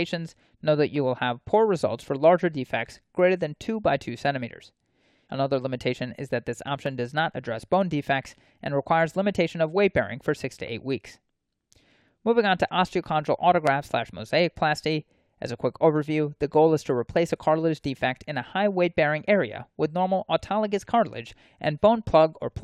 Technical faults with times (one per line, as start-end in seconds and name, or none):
6.86 dropped samples
13.67 dropped samples